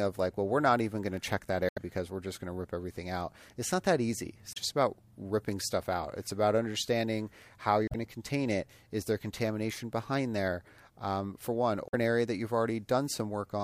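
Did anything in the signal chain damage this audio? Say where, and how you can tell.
Yes, at the codec stage: there's damaged data in the compressed stream. Short glitches break through the speech at 1.69–1.78 s, 4.53–4.57 s (between "not that easy it's" and "about ripping stuff out"), 7.87–7.95 s (after "it's about understanding how", before "to contain it is"), and 11.88–11.95 s (after "there um for one"). Each lasts under a tenth of a second. Those bursts come from the decoder choking on corrupted frames, losing sync, and hunting for the next valid header.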